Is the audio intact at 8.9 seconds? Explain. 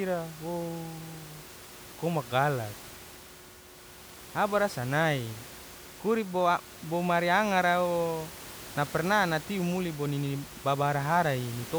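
Yes, the speech is intact at 8.9 seconds, with only the room's own background noise sitting about 17 dB below it.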